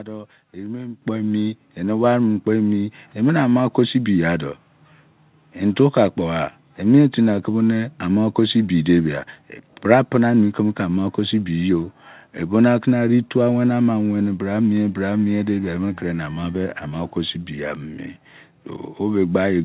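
At 1.02 s the speech and the background noise behind it jump up together by about 8 dB, a single abrupt step rather than a fade. That is the microphone volume stepped up: the call software judged the input too quiet and raised the device's gain at once. The call path's band limit is audible throughout, with nothing above 4 kHz, which fits a G.711 A-law connection.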